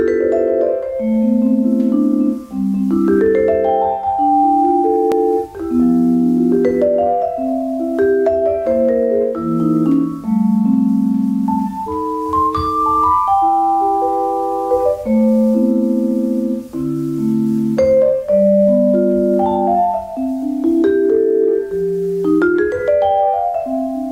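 At 5.12 s the sound jumps forward, likely a dropped buffer (overrun), with a few milliseconds lost and both sides spliced together. Unlike an underrun dropout, no gap of silence appears; the audio simply skips ahead.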